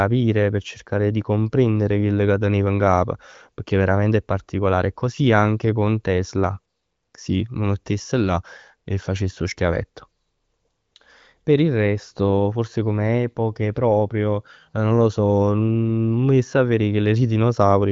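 No technical faults can be heard in the speech, which comes through an AMR wideband (HD Voice) codec at a rate that keeps it clear.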